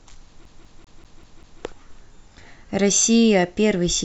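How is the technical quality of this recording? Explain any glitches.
Quality is compromised by one clear glitch, a CD stuck on one turn. From 0.45 to 1.62 s, a scratch throws the laser back a track each revolution, replaying one 195 ms fragment of speech six times with short mutes. It sounds like a fast, even stutter. Waveform and spectrogram show identical blocks tiled at regular gaps.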